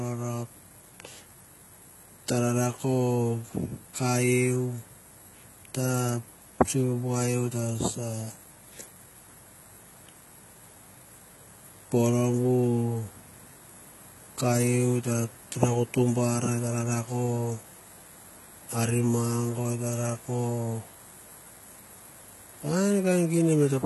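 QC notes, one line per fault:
Throughout, likely HE-AAC compression: copied, rebuilt treble makes s sounds gritty and metallic. The spectrogram shows blocky replicated upper bands and is empty above 11.8 kHz, which fits about 16 kbps.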